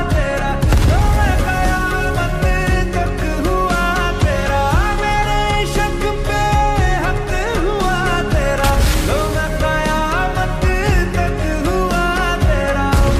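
No technical faults can be heard anywhere in the audio. Nothing in the sound marks a point where something went wrong.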